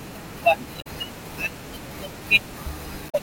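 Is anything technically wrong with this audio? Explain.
Yes. Damaged data in a compressed stream breaks the speech twice, from 0.78 to 0.87 s and from 3.06 to 3.15 s, each about 90 ms long. Corrupted bytes make the decoder misread the frames there and lose sync until it finds a valid frame header, so each spot comes out as a chirp, squawk, click or short hole.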